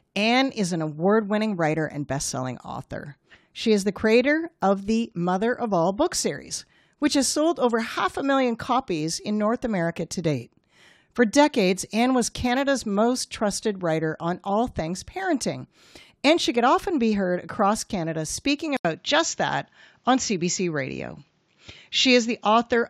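A speech clip. At 18.77 s an 80 ms gap breaks the sound. From there to the end, nothing passes above 7.6 kHz, the tone dulls, and a faint new noise floor appears about 50 dB down, at about the same level. This is likely the input switched to a poorer device.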